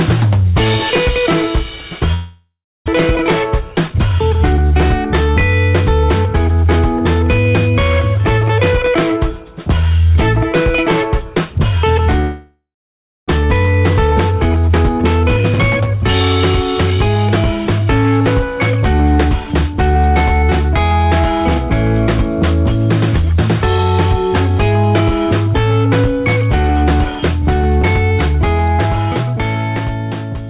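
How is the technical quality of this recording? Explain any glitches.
The recording has two long dropouts and three stretches of sped-up playback, all typical of a call over a network. The band stops at 4 kHz, which fits G.711 mu-law telephone coding at 64 kbps.

Long network dropouts occur at 2.14–2.90 s and 12.20–13.30 s, likely from packets arriving late or not at all. The receiver stretches the last sound into a fading buzz, then leaves silence (about 0.31 s, then 0.63 s), and about 0.6 s of audio is lost each time. Unlike a brief concealed packet loss, the fade ends in real silence and the sound resumes with a gap.

Jitter buffer speed-ups run at 3.13–4.60 s (107%), 13.37–15.96 s (114%) and 16.90–17.30 s (113%). After each backlog, the receiver drains excess delay by cutting tiny pitch-period slices, about a tenth of a second, then nearly half a second, then less. The sound feels hurried. 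Unlike resampling, the pitch stays unchanged.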